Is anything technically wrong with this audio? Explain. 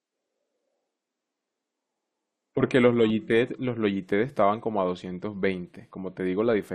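Yes. At 3.1 s, an overlap between stream segments made the player trim about 6 ms of real speech, so the waveform jumps and a brief click or skip is heard.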